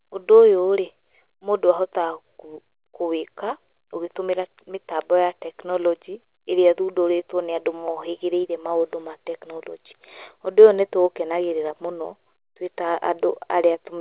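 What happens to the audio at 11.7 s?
At 11.70 s the speech is intact, with no dropout, glitch or distortion, only the narrow telephone-band sound of the call path, which carries nothing above 4 kHz.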